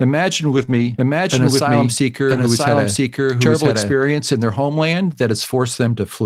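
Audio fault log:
0.57–0.63 s, 0.69–0.87 s and 2.31–2.37 s, lost packet rebuilt from error correction: the speech turns briefly rougher and grainier but never drops out. Each time, packets went missing and the decoder played the lower-bitrate backup copies carried in the following packets instead of leaving gaps. About 40 ms of speech is rebuilt in the first and third spots, which fits two lost packets each. About 100 ms is rebuilt in the second spot, which points to five.
0.65–0.69 s, short concealed packet loss: a quick smear or wobble sits between the first two rebuilt stretches. About 20 ms of audio arrived too late to play, and no backup copy covered it. The receiver filled about 19 ms of that gap by extending the preceding sound, carrying on its pitch where voiced or shaped noise where not. It then crossfaded back into the real signal, leaving that small blurred seam.
0.98–3.92 s, doubled audio track: a clean second copy of the speech runs about a second behind the original and at roughly the same loudness. 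It has no reverberant tail or room colouring, and it cuts in and out abruptly, ending just before "in their homeland". That points most likely to the same signal being picked up again through a slower path, or an edit leaving two offset copies stacked together.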